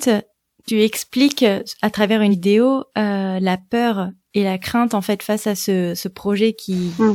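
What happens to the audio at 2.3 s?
After "expliques à travers", compressed frames are skipped at 2.30–2.35 s. Roughly two frames vanish, so the speech jumps ahead by about 100 ms at the join.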